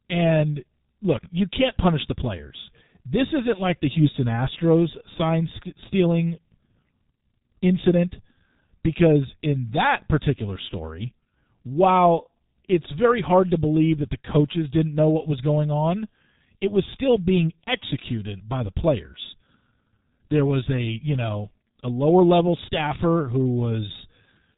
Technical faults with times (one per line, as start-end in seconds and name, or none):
0.00-24.57 G.723.1 codec